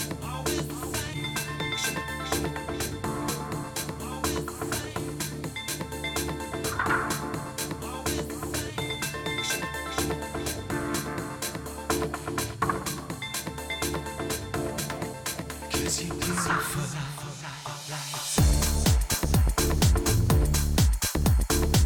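At 1.13 to 1.18 s, then at 6.81 s, compressed frames are skipped: the decoder drops a few 20 ms frames, about 70 ms of audio, and later roughly one frame. Each jump leaves the audio leaping ahead, seen as a brief discontinuity in the waveform and spectrogram.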